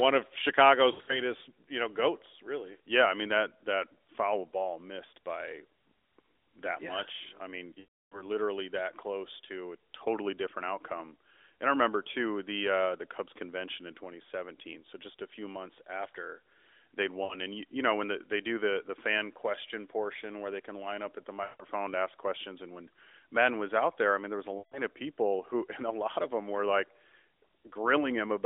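Radio errors corrupted AMR speech frames, so the decoder filled the lost AMR speech frames by repeating its last good pitch and vocal tract settings at falling gain. From 0.92 to 1.21 s, scattered losses cause a brief warble. From 7.80 to 8.25 s, about 320 ms is lost, and the sound drags out and fades to silence. Shorter dips follow at 17.24 to 17.35 s, 21.44 to 21.65 s and 24.58 to 24.81 s, each recovering roughly.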